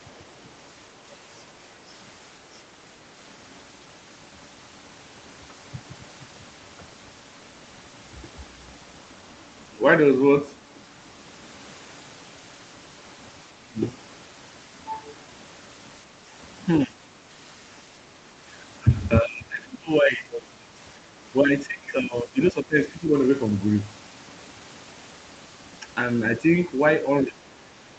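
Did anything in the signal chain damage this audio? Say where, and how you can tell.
Yes. Around 0.09 to 0.13 s a very faint second voice surfaces: the other side's voice leaking through, likely residual echo the call processing missed. On a spectrogram it appears as a weak, brief smear.

Speech suppressed in double talk occurs at 13.52–13.79, 16.86–17.09, 18.13–18.3, 19.22–20.77, 21.47–23.15 and 27.24 s to the end. The echo canceller likely turns the talker down while both sides speak, leaving deep holes in the waveform envelope.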